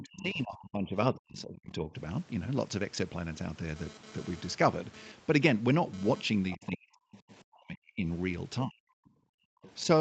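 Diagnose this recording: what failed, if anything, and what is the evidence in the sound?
Call processing, echo canceller: speech dips by about 35 to 40 dB from 0 to 1.9 s, 6.55 to 8.06 s and 8.64 to 9.07 s. This is likely speech suppressed in double talk, with the canceller mistaking the talker for loudspeaker echo.

Same echo canceller: other side's voice leaking through, about 20 dB under the speech at 0.16 to 0.21 s and 6.5 to 7.35 s, and about 25 dB under at 9.62 to 9.71 s. Likely residual echo that wasn't fully removed.

Analogue wiring: GSM phone buzz from 3.76 to 6.23 s, a raspy 217 Hz buzz about 21 dB below the signal. A nearby phone in data mode is bursting, and the circuit is rectifying the radio pulses.

Call processing again: background gated by the echo canceller from 9.35 to 9.62 s. The room sound drops by about 40 dB while the canceller clamps the mic, then returns when it releases.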